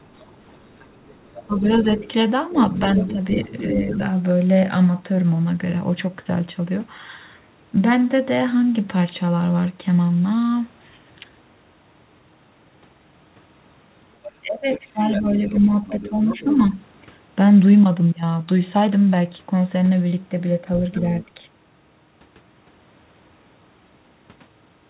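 Speech clip. From 0.03 to 3.98 s, 14.29 to 16.57 s and briefly at 20.95 to 21.25 s, the other side's voice is leaking through, roughly 15 dB below the talker and fainter at 21 s, likely residual loudspeaker echo the canceller missed. Speech is suppressed in double talk at 1.47 to 2.06 s, 2.86 to 3.99 s and 14.42 to 16.46 s, with dips of roughly 5 to 15 dB, deepest near 15 s, likely as the canceller attenuates both voices during overlap.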